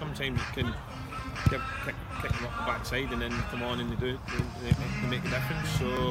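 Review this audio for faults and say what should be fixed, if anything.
There's a regular click from about 1.39 s to 5.97 s, roughly every 1.53 s, so about four of them. That steady spacing points to clock drift buffer slips: two devices on separate clocks, likely off by something like 700 ppm, with the buffer dropping or repeating a small block of samples, on the order of 50 each time. Fix it by locking both devices to one word clock or adding proper sample-rate conversion between them.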